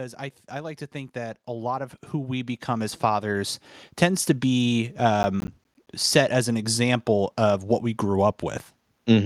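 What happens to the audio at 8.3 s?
Nothing goes wrong at 8.3 s; the audio plays through that moment intact, with no dropout, click or distortion.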